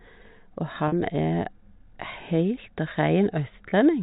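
At 0.88 to 0.92 s and again at 3.70 to 3.72 s, packet loss with pitch repetition bridges gaps of 40 ms and 20 ms, which fits two lost 20 ms packets and then one. The receiver loops the last pitch period, so each gap sounds like a brief, slightly buzzy hold. A waveform shows identical repeating cycles, and a spectrogram shows flat, frozen harmonic stripes.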